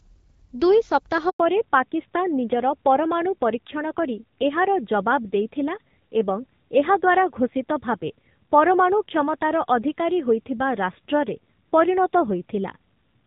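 At 1.29 s the sound cuts out for about 100 ms, until 1.39 s. That's a handover gap: the call got passed from one network to another, and nothing came through while the switch happened. You hear the signal fall away almost instantly, then a stretch of dead silence rather than any noise or glitching, and whatever was said in that tenth of a second is simply gone.

Right as the audio comes back at 1.39 s, it's no longer the same quality, and it stays that way through to the end. This is a fallback to narrowband. Before the gap the HD Voice path sounds fairly clean, with just light coding artefacts, consistent with AMR-WB at around 12.65 kbit/s. After it, everything above 4 kHz is missing, so the sound turns dull and boxy with a rougher, grainier texture, which points to an older narrowband codec running at something like 7.4 kbit/s.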